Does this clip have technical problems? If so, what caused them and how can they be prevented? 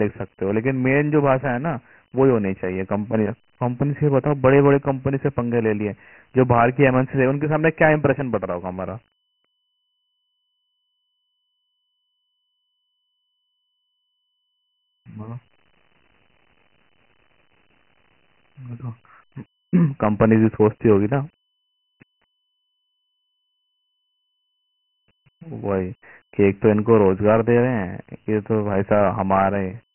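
Yes. The whole clip carries Dialogic VOX ADPCM damage, and it is heavy. Nothing sounds above 3.1 kHz, so the speech is dull and boxy. A gritty hiss rides along with the speech. It rises and falls with it. The codec stores each sample as a 4-bit step from a predicted value. Coarse steps leave that grainy residue. The sound points to 6,000 samples a second at about 24 kbps. To prevent it, keep a linear PCM master and encode to VOX only for the playback system.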